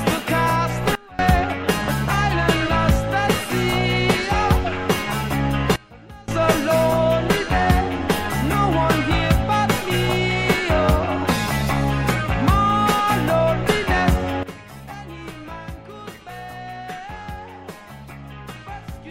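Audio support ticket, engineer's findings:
Sudden gain jump, three instances: level drops about 23 dB at 0.95–1.19 s, about 24 dB at 5.76–6.28 s, about 16 dB from 14.43 s to end. Sound and noise floor step together, no ramp. Likely an unramped digital gain or bit-shift change.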